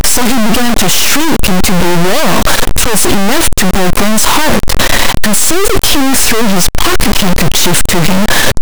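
Speech with harsh, buzzy distortion throughout, and pauses filled with loud noise at roughly -5 dBFS, likely a stuck high bit, unlike clipping, which leaves silence clean.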